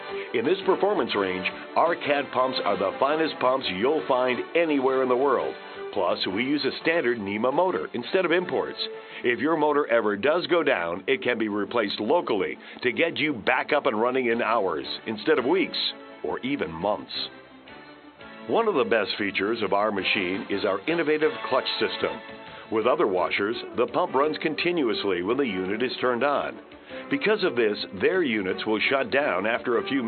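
No technical faults are audible.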